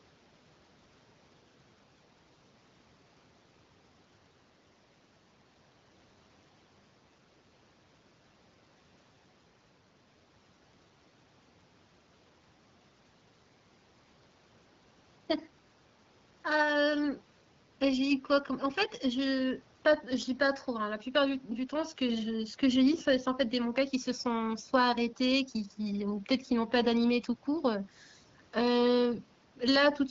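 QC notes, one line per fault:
No faults are present in the clip. The speech runs through the AMR wideband (HD Voice) codec at 12.65 kbit/s, which leaves it clear, with only light coding damage and the band above 6.4 kHz filled with shaped noise.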